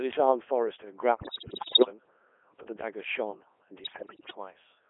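Codec 2 vocoder damage runs through the whole clip. Instead of keeping the waveform, the decoder rebuilds the speech from sine waves driven by pitch, voicing, energy and a spectral envelope, so the voice comes out robotic and buzzy, heavily damaged, and squeezed into a 300 Hz to 3.4 kHz line band. The relatively full envelope detail fits Codec 2's top 3.2 kbit/s mode.

Bit errors on digital voice radio strike from 1.14 to 1.90 s and again from 3.84 to 4.37 s. Flipped bits corrupt the frame parameters, so each hit frame gets the wrong pitch, level, voicing or spectrum. The synthetic voice lurches in pitch and loudness and breaks into bleeps, warbles and gibberish. The first burst is harsher, fitting an error rate of around fifteen percent against roughly seven percent in the second.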